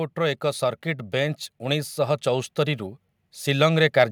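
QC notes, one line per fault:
0.15–2.86 s, automatic gain rising: the gain control judged the input too quiet and gradually raised its gain by about 4 dB, so the speech and background swell together.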